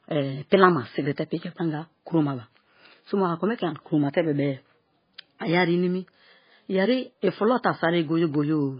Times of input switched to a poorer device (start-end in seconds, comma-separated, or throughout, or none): none